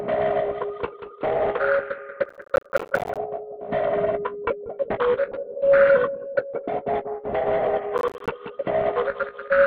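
A recording of everyday sound with two kinds of fault. Processor overload crackle hits from 2.25 to 3.17 s, and again from 7.98 to 8.28 s. The processor misses its deadlines for short buffers, around 10 ms each, over and over. Each miss leaves a brief silent hole with hard edges. Runs of these in a row, about 50 in the first burst and 15 in the second, are heard as gritty tearing. A call bitrate drop runs from 5.32 to 8.89 s. The sound turns rough and muffled, and the top end stops near 8 kHz. This points to the encoder falling from about 64 kbps to about 17 kbps after a lower bandwidth estimate. It stays at that low rate for about 3.5 s, then recovers.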